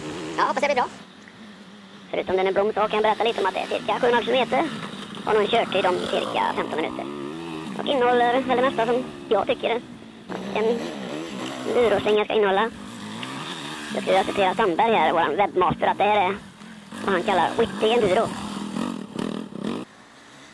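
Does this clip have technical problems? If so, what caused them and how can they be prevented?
Yes. A wrong sample rate runs through the whole clip: everything plays 1.5 times too fast and about 7 semitones high, which fits 16 kHz audio played at 24 kHz. Unlike pitch shifting or time-stretching, speed and pitch move together. Prevent it by reading the file's stated rate and resampling before playback.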